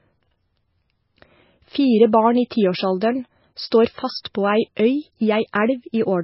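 From start to finish the speech carries heavy MP3 compression damage. The encoder had too few bits, which fits a rate near 18 kbps, so it dropped weak frequency components that then flicker in and out between frames. The result is a watery, swirling texture with metallic chirps on sibilants and smeared consonant onsets, likely from low-bitrate MP3 encoding.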